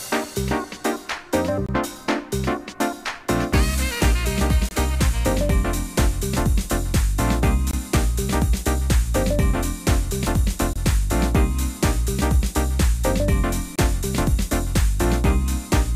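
The audio has a gap between chunks: hard-edged holes of about 23 ms at 1.66, 4.69, 7.71, 10.73 and 13.76 s, about 3 s apart. The material seems to arrive in 3-second blocks, with silence inserted at each join while nothing's actually lost.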